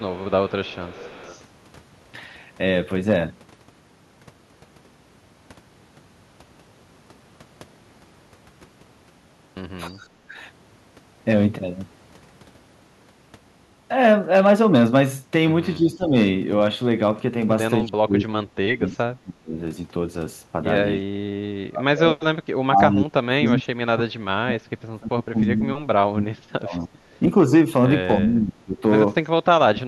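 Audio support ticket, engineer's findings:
Echo leak, 0.00–1.42 s and 18.88–18.96 s: faint copy of the talker returning 305 ms late, roughly 25–35 dB down. Likely the far-end echo canceller leaving residual loudspeaker pickup.

Speech suppressed in double talk, at 9.90–10.36, 15.77–16.13, 17.84–19.57, 20.97–27.53, 28.21–28.83 and 29.59 s to the end: talker dips roughly 10–35 dB, the long 20.97–27.53 s stretch worst. Likely the echo canceller ducking overlapping speech.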